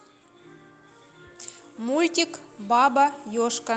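From 1.77 s to 3.69 s the speech and its background swell together by about 4 dB: automatic gain rising, as the control judged the input too quiet and slowly raised its gain.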